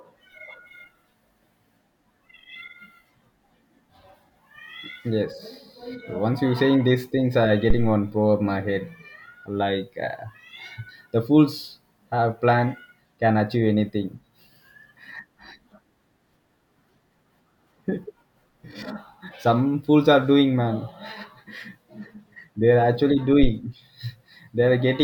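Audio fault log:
7.70–8.01 s and 23.43–23.50 s, phantom power thump: a supply was switched on a live input, and the voltage step reached the signal through the coupling capacitors. Each is a deep, dull thump, the first just after "saying these things I" peaking at about -6 dBFS and dying away over roughly 70 ms, the second after "are actually" at about -7 dBFS with a 15 ms decay. The waveform shows a large one-sided swing settling back to centre, and the spectrogram a bright column heaviest at the bottom.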